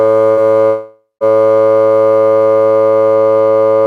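At 0.31 s the music breaks for about 84 ms in a burst of packet loss. Roughly 60 ms of audio never arrived, and the receiver filled about 54 ms of it by stretching the last sound and lowering it, which gives a brief held buzz or fading hiss. The music picks up slightly further on. It is too short to fade out completely, and that sets it apart from a full dropout.

From 0.67 s to 1.24 s the music drops out for over half a second. About 540 ms of material is missing. The last sound first carries on and decays, fading to about 130 ms of plain silence before the music returns past the lost section. This is likely a long network dropout, because the gap is long enough for the concealment to die away to silence.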